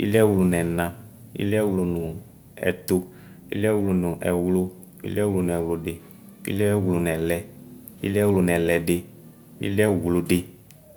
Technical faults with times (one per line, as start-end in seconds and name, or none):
none